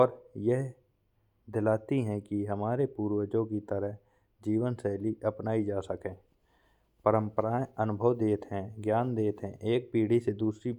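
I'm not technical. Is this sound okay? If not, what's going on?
Yes, this one's fine: nothing in the recording is going wrong, so there's nothing here for you to worry about.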